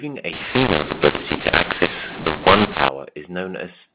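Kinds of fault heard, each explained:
mu-law and A-law mixed up: From 0.33 s to 2.89 s, speech coded with the mu-law curve is decoded with the A-law curve, so each 8-bit code maps to the wrong amplitude. Some levels come out too loud, others too soft, and the voice turns harsh and gritty while pauses fill with hiss. On the waveform the envelope looks jagged and gaps never drop to silence. The spectrogram shows broadband noise spread across the whole band up to the 4 kHz telephone limit.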